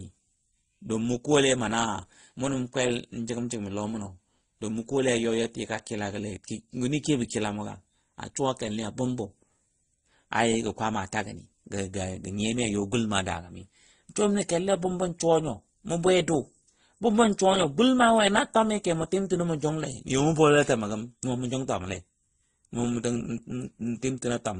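From start to finish, the speech carries layered coding damage. Nothing is heard above about 9.8 kHz, so the top end sounds dull and closed. Smeared, swirly artefacts sit alongside a separate brittle, watery texture. The likely cause is transcoding between lossy codecs. The sound points to an MP3 at around 32 kbit/s, re-encoded to Opus at around 24 kbit/s. The second encoder wasted bits on the first one's errors and added its own.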